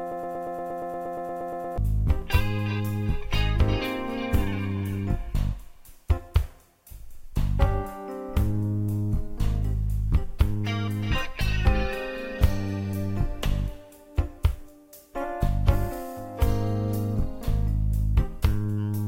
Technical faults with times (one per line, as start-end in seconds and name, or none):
0.00-1.78 broken-record loop